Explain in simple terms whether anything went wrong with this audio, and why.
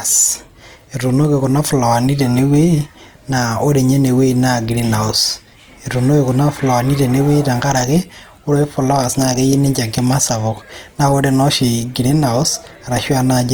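Yes, something went wrong: the whole clip sounds rough and grainy, likely from Opus compression squeezing the speech hard. Unlike MP3 damage, there's less watery swirl and the sound isn't muffled; the full treble is there, but filled in with a gritty, noisy texture.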